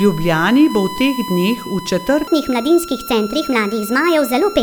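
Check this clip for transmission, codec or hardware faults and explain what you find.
Two faults here. A steady USB whine runs under the whole clip, and the second half plays at the wrong speed.

The USB whine is a fixed 1 kHz tone sitting about 15 dB below the speech the entire way through. That pitch matches the bus's 1 ms frame rate, with current pulses from the USB traffic leaking into the audio through the power or ground.

The section at the wrong speed runs from 2.27 s to the end. It plays 1.36 times too fast, so the speech turns hurried and jumps up by about five semitones. The likely cause is an editor or player running that part against the wrong clock.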